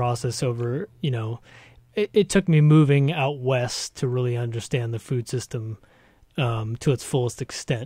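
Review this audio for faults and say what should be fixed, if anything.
No faults can be heard in the speech, so nothing needs to be fixed.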